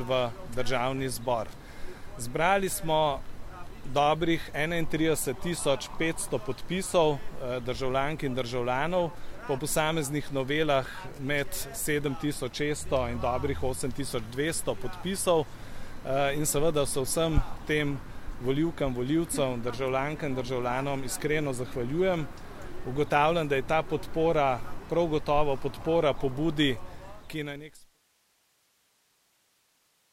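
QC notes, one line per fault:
No faults to note; the smooth fade out at the end begins around 26.5 s and is complete by 28.02 s.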